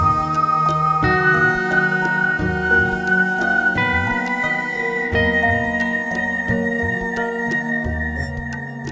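No faults are audible anywhere in this music clip.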